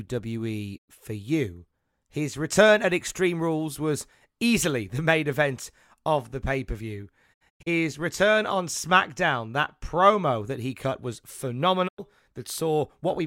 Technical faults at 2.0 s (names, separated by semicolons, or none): none